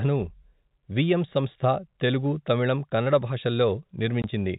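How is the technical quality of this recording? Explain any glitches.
There is one glitch, a dropout near the end of the speech. The telephone-band G.711 coding stops at 4 kHz and adds faint quantisation noise.

From 4.22 to 4.24 s there is packet loss filled with silence. A 20 ms stretch of audio never arrived, which fits two lost 10 ms packets, and the receiver inserted digital silence. The result is a brief hole with abrupt edges.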